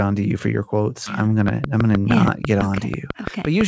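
At 1.06 s, just after "for your quotes", a skip ahead occurs. A stretch of roughly 300 ms of audio was dropped, either in transit or by an overflowing jitter buffer while later audio was already queued. Nothing was inserted to cover the hole, so playback lurches straight from one side of the missing section to the other. The speech jumps forward with no gap, and about a third of a second of content simply vanishes.

From 1.48 s to 3.62 s a train of clicks runs over the speech. Something is injecting a repeated pulse, likely interference from nearby equipment or a faulty connection or power supply. The clicks come at a regular 6 per second, around fifteen in all, and they stand some 15 dB above the speech. They are heard as a steady ticking that continues through pauses as well as under the talking.

Overlapping the clicks, from 1.63 s to 1.98 s, the jitter buffer speed-up kicks in. The buffer was holding more audio than its target, so the receiver trimmed short pitch-period-sized pieces again and again, about 40 ms in total. 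This pushes playback to 110% speed while the pitch stays the same, and the speech in that stretch sounds hurried. The band limit at 8 kHz from the G.722 call path sits underneath all of this.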